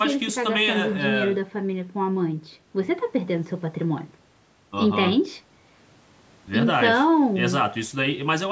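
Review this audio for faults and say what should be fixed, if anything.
Nothing here needs fixing; no faults were found.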